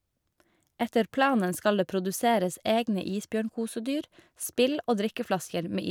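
Nothing technical goes wrong anywhere in this bit of speech, so there's no fault to point out.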